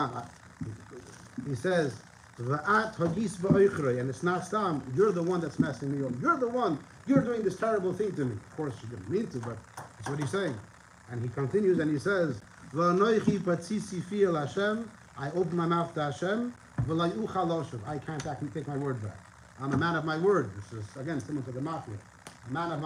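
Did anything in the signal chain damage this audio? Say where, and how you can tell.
No, none of the stages the signal passed through left any audible damage on it.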